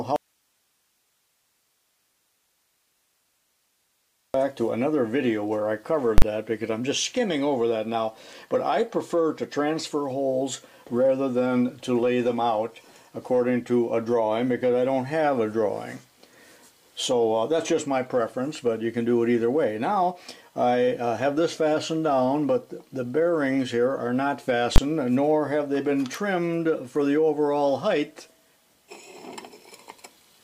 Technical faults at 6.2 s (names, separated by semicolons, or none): invalid numbers at full scale